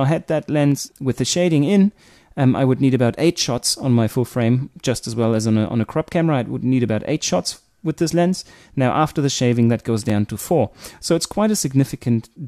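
Overlap between stream segments shows up as two tiny skips, at 6.12 s and 10.10 s, where 5 ms and 15 ms of audio vanish and the waveform jumps. Overlapping segment timestamps made the player trim sound that was never duplicated; the spacing fits 4-second segments.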